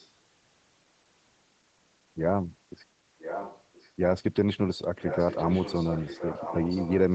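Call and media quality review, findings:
Echo leak: delayed copy of the speech returning about 1.02 s after the original. Very faint at 0–0.11 s, around 30 dB down. Stronger at 3.19–3.9 s and from 5.01 s to the end, roughly 10 dB under the direct speech. Likely cause: far-end loudspeaker pickup that the echo canceller failed to cancel. Distinct from room reverb because it is a separate repeat at a fixed one-second lag, with no smeared decay tail following each syllable.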